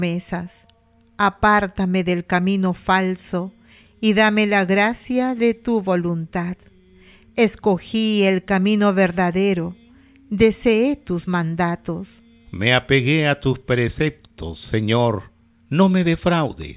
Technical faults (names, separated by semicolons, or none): none